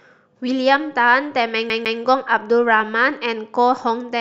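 CD stuck on one turn at 1.70 to 2.00 s in this speech: a scratch throws the laser back, so a 153 ms slice replays twice, with brief mutes between.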